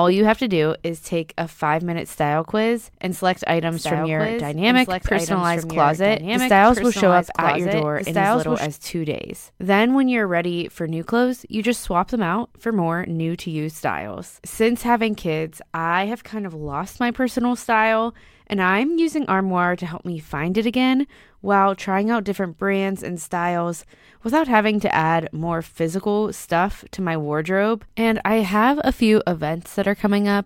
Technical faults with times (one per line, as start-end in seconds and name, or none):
3.72-8.66 doubled audio track